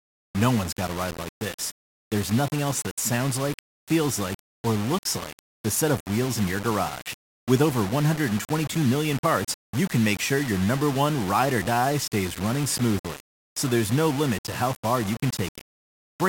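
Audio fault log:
Throughout: low bit depth without dither. The speech has a coarse, grainy distortion that rises and falls with the voice, sitting only around 15 dB below it, so quiet passages turn gritty and the faintest tails sputter or drop to silence. The likely cause is samples rounded onto very few levels, consistent with about 5 bits, with no dither, so the error tracks the signal instead of forming a steady hiss.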